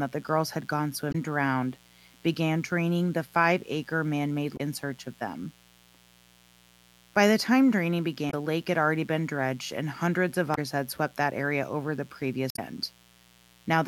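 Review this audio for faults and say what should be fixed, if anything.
A mains buzz runs through the whole recording: switching spikes from a dimmer, rectifier or unshielded cable leak into the signal path twice per 60 Hz cycle, leaving a steady, raspy buzz rich in harmonics, sitting about 30 dB below the speech. Shielded, properly grounded cabling and keeping the chain away from dimmers and cheap power supplies would prevent it.

Damaged data in a compressed stream shows up at 1.09–1.15 s, 4.53–4.60 s, 8.27–8.34 s, 10.52–10.58 s and 12.48–12.59 s: corrupted bytes make the decoder misread frames and hunt for the next valid header, so each spot becomes a short chirp or squawk of roughly 70 to 120 ms. Checksummed, error-protected transfer and storage of the encoded file would stop this corruption.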